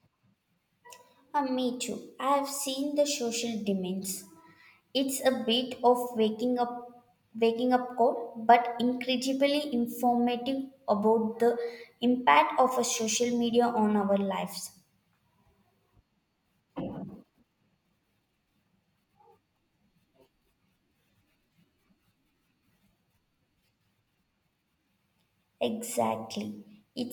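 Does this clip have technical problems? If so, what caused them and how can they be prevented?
Yes. At 9.73 s, just after "but incredibly", there is a single sharp click caused by dropped samples. A couple of samples likely went missing, so the waveform jumps straight to a later value. On a spectrogram this appears as a thin vertical line across all frequencies. To prevent it, give the recording and processing chain enough buffer headroom and a stable clock so no samples are skipped.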